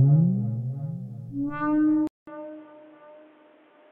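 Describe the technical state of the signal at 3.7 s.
At 3.7 s the input has switched to a poorer device, from 2.07 s to the end. A 200 ms gap marks the likely switch. Nothing passes above 3.8 kHz, so the sound is dull and boxy, about 5 dB quieter, with new noise about 30 dB down.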